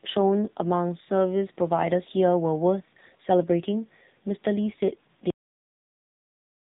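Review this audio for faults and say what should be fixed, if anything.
The whole clip has been through the AMR narrowband mobile codec, and it's heavily damaged. Nothing gets through above about 3.8 kHz, so the speech is boxed into that phone-line band. It also has the buzzy, synthetic edge you get when the codec rebuilds the vocal tract from only a handful of pulses per sub-frame, which fits one of the low AMR-NB modes, around 6.7 kbps. Fix this by recording or passing the speech at full bandwidth and not routing it through a narrowband mobile path.

The ending is a cut-off end. At 5.30 s the speech stops dead in the middle of a sound and drops straight to digital silence, with no decay, and stays silent to the end. That's what you get when the last buffers were never written or played out, so the tail of the recording simply isn't there. Fix this by flushing and finalising all pending buffers before the recording is closed.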